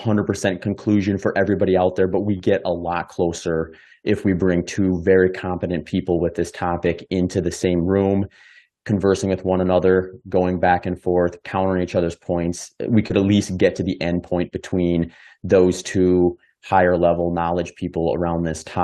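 At 13.08 s, just before "at least get to", about 20 ms of audio went missing and was papered over by short concealed packet loss: the decoder stretched the preceding sound, which leaves a quick smear or wobble. Right behind it, at 13.1 s, a lost packet rebuilt from error correction fills the 20 ms from the next packet's low-bitrate copy, so there's no gap, just a rougher, noisier moment.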